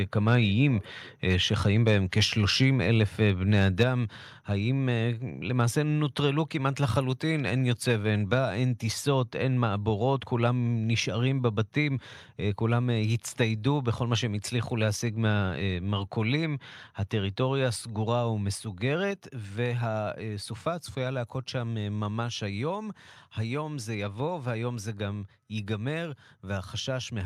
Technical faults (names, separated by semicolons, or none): microphone overload; microphone volume stepped down